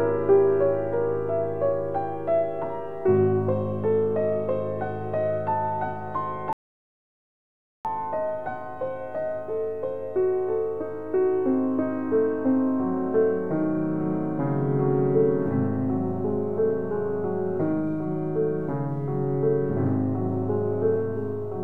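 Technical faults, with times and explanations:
6.53 to 7.85 s, audio dropout to silence: the sound cuts off mid-flow and about 1.32 s passes in silence with no room tone, then resumes abruptly. The likely cause is a lost input, with the recorder writing silence until the signal returned.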